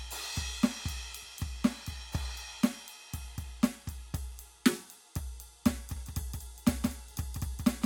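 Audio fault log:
5.96 s to the end: doubled audio track. The music is joined abruptly by a second, full-band copy trailing by roughly 150 ms and about 5 dB quieter, with no decay or room colour, likely from a slower second capture path or two misaligned copies in an edit.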